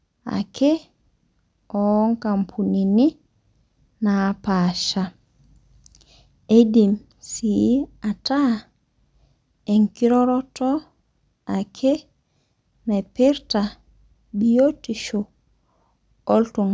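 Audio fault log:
No technical faults are audible anywhere in the speech recording, and the signal stays steady and intact throughout.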